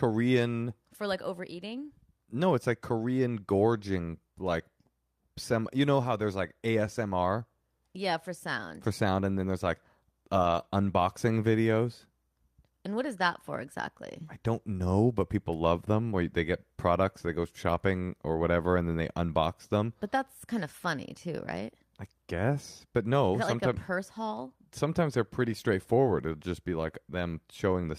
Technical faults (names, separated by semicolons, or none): lost packet rebuilt from error correction